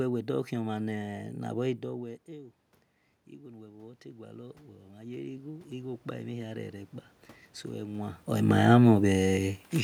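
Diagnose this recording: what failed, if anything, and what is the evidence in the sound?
Automatic gain rising, in the call processing stage: from 3.3 to 6.8 s, after the input dropped about 17 dB, speech and room noise swell together by about 14 dB. On a waveform, envelope and noise floor climb slowly in step, and a spectrogram brightens uniformly.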